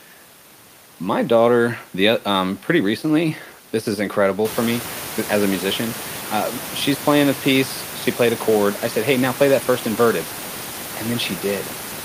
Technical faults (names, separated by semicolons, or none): none